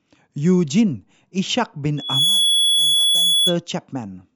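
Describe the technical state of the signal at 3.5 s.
At 3.5 s a piercing, steady tone near 3.4 kHz sits a few decibels above the speech, close to the end of a loudspeaker feedback squeal that runs from 1.97 s to 3.56 s after swelling up over roughly a third of a second. The microphone is picking up the loudspeaker it drives, and at 3.4 kHz the loop gain exceeds one, so that single frequency keeps reinforcing itself until the squeal stops just after this moment.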